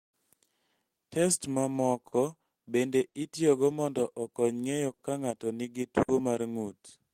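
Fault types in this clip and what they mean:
Clock drift between sender and receiver: The sender's clock runs about 5 percent slow. The receiver's buffer keeps draining, so small timing hiccups recur throughout the speech.
Repeated timing corrections: From 0.80 to 1.82 s, playback slows to 95 percent speed to keep pace. This adds roughly 70 ms, so the speech drags slightly.
Short stall from a late packet: At 2.07, 3.08, 4.93 and 6.02 s, the buffer runs empty. The last sound is held 50 to 60 ms, with nothing lost.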